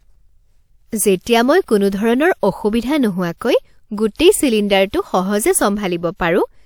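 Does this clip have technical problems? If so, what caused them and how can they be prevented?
Yes. A transform codec spread its quantisation noise across a whole block, so noise meant for a sharp attack in this speech leaked into the quiet just before it: pre-echo from 3.38 to 3.41 s, a 33 ms hiss smearing the onset. Using a higher bitrate or a codec with block switching for transients prevents it.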